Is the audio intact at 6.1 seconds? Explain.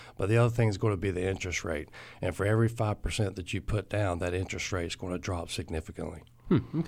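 Yes, the audio is intact at 6.1 seconds, with no dropout, click, distortion or other fault at that point.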